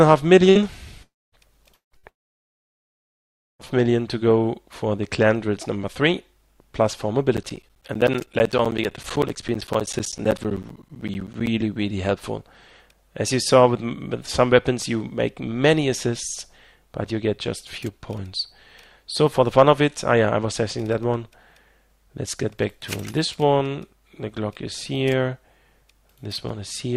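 A network link losing data in short runs produces two bursts of packet loss, at 0.49 s and again at 1.97 s. Each time roughly 60 ms of audio never arrived, and the receiver papered over the hole by extending the last sound for about 60 ms and fading it, so a brief held buzz or hiss replaces the material before the sound jumps ahead with that stretch gone. Longer gaps in arriving data, likely long network dropouts, occur from 1.03 to 1.35 s, from 1.74 to 1.94 s and from 2.09 to 3.62 s. The same concealment stretches the last sound into a fading tail, but it cannot hold on, so most of each gap falls to silence: about 240 ms of the 300 ms lost in the first, 140 ms of 180 ms in the second, and nearly all of the 1.5 s lost in the third, before the sound resumes further on. Separately, a background task stalling the USB bus or audio driver causes periodic USB or driver dropouts between 7.37 and 11.47 s. 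Every 64 ms, around 10 ms of audio is replaced by silence, some seventy times in all, heard as an even train of ticks or pops riding on the signal.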